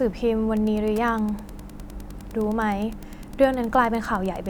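From 0.57 s to the end there is Wi-Fi interference: the audio circuit rectifies a nearby radio's beacon, sent every 102.4 ms, producing steady ticks about ten times a second, roughly 25 dB under the speech. Mains hum, by contrast, is a continuous tone.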